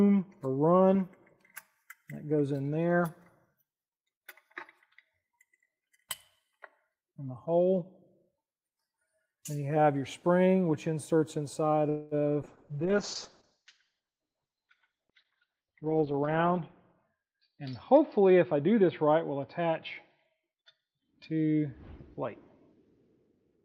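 At 11.89 s the sound stalls for about 220 ms, until 12.14 s, and a fading buzzy continuation fills the gap, so nothing drops to silence. This is a call audio freeze, likely caused by packets held up in transit until the jitter buffer ran dry. The receiver stretched the last fragment, then resumed exactly where it stopped, adding delay without losing material. On a spectrogram this shows as smeared, repeated harmonic bands that decay, and the waveform shows a dwindling, regular pattern instead of a flat line.

From 12.43 s to the end, a call bitrate drop takes the encoder from 32 kbps down to 7 kbps, and the lowest rate holds for about 3.8 s. With so few bits, Opus codes the signal coarsely and narrows the band from 20 kHz to 6 kHz, so the sound turns muffled and watery. A spectrogram shows the upper region above 6 kHz abruptly emptied, leaving a hard ceiling. The remaining bands look blotchy and quantised rather than smoothly textured.

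Within that degraded stretch, from 15.00 s to 16.58 s, a jitter buffer speed-up plays the audio at about 111% of normal speed while the pitch stays unchanged, so it sounds hurried. The buffer had built up more audio than its target, so the receiver repeatedly cut out short pitch-period pieces, about a fifth of a second in total, to bring the delay back down. The waveform looks compressed in time, and the spectrogram shows events packed closer together with tiny splice seams.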